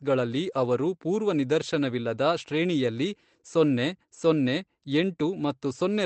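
No technical faults can be heard anywhere in the speech.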